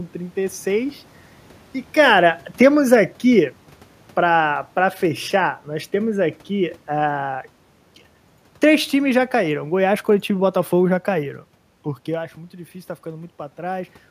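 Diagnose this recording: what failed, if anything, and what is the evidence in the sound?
The automatic gain control in the call processing stage is falling: from 1.92 to 3.61 s, and again from 8.64 to 11.06 s, the level eases down by about 3 dB, ending just before "para fechar nós temos" the first time. The AGC judged the input too loud or its background noise too strong and pulled its gain back gradually. The room noise sinks with the voice, which rules out the talker simply moving, as happens near 2 and 12 s.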